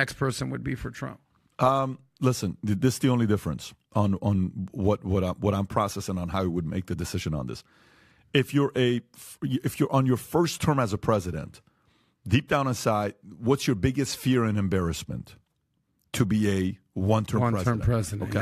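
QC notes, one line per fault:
No problems were heard anywhere in this speech recording.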